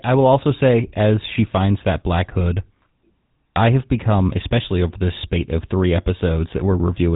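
Throughout the speech, the GSM full-rate codec has coded the voice at about 13 kbps, modelling the vocal tract and exciting it with sparse, regularly spaced pulses. The damage is plainly audible: a buzzy, gravelly roughness, and nothing above 3.8 kHz.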